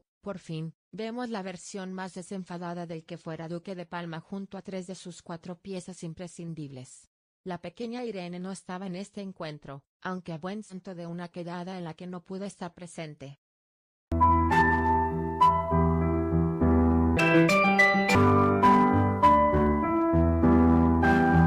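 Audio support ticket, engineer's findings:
Stream segment skipped at 10.69–10.75 s. Audio jumps ahead with a brief blip. Likely a failed segment fetch, with the player moving on to the next segment.

Section at the wrong speed, 17.17–18.15 s. Plays at 2× speed, pitch raised roughly ten semitones. Likely resampled against the wrong clock.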